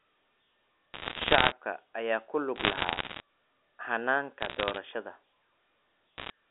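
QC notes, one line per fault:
0.94–1.52 s, 2.56–3.20 s, 4.40–4.78 s, 6.18–6.30 s, bit errors on a digital phone line: flipped bits on the A-law line each corrupt one sample, roughly one to two in a hundred bits (lighter at 4.40 s). Sign and high-bit hits become sharp ticks, heard as crackle over band-limited speech before and after "ayaa ku".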